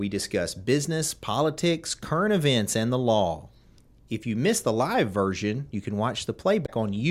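Speech, with a brief burst of damaged data in a compressed stream from 6.62 to 6.69 s. About 70 ms of corrupted frames make the decoder misread the bitstream and resync, giving a short chirp or squawk. On a spectrogram this appears as a blocky, smeared patch unlike the surrounding harmonics; the waveform shows an abrupt, irregular segment.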